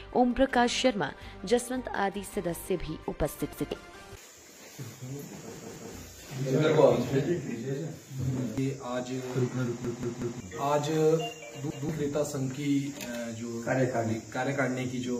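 The audio has a repeated buffer at 3.53, 5.57, 9.85 and 11.70 s. New audio arrived late, so a 186 ms piece replays one to three times with hard joins, which fits an 8192-sample buffer.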